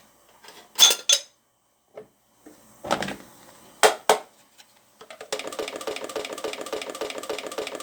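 At 5.63 s a broken-record loop begins: a 0.28 s fragment repeats exactly, back to back, eight times until the end, most likely from a stalled player or stream resending its last buffer. The spectrogram shows identical blocks tiling the timeline, and the waveform shows an evenly repeating shape.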